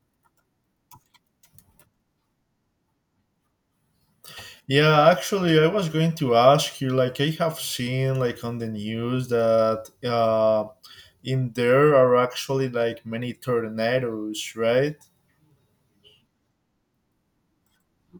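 Nothing in the speech recording stood out as a technical problem on listening.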